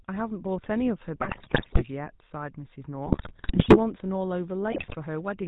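It's a speech clip, and the whole thing has that buzzy, gravelly GSM full-rate codec sound: nothing above 4 kHz, and a rough, pulse-driven texture from the vocal-tract model and its thinned-out excitation. That fits the old 13 kbps full-rate coder, and the damage is plainly audible. On top of that come three bursts of GSM bit errors, from 1.21 to 1.84 s, 3.07 to 3.79 s, and 4.72 to 4.96 s, where the voice breaks into squawks, pops and gargling. Corrupted filter, pitch and gain values are bending the spectrum frame by frame, which points to an error rate of a few percent.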